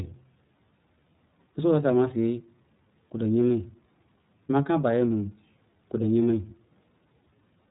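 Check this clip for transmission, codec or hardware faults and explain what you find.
The speech carries one fault, present from start to finish: iLBC codec coding. Throughout the clip, nothing above 3.8 kHz survives, and on a spectrogram the energy stops at a flat ceiling with empty space above it. The codec works on 30 ms frames, consistent with its 13.33 kbps mode, and codes each frame's excitation independently of the last. That makes the speech intelligible but plainly rough and synthetic. The waveform's fine structure looks coarsened.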